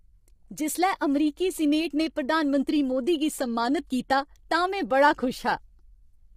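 From start to end, the speech sounds rough and grainy. A hiss of noise fills the gaps between the pitch harmonics. The top band sounds thin and synthetic. This is heavy damage from low-delay AAC compression, likely an AAC-ELD encoder of the kind used in video calls. Its short frames cannot separate the harmonics cleanly, so noise leaks between them. The amount of damage fits a bitrate around 24 kbps.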